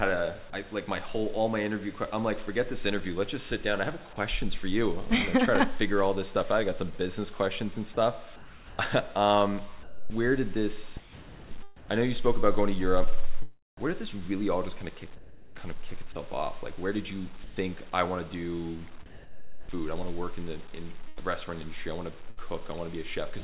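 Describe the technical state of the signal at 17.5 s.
From 17.44 to 17.56 s the sound gives way to steady comfort noise for about 120 ms, likely sound dropped by the voice detector treating it as background.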